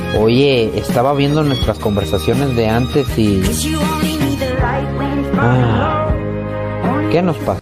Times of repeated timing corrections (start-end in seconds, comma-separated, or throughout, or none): 0.21-3.34, 5.15-7.61